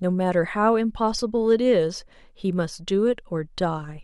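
No audible faults occur anywhere in this recording.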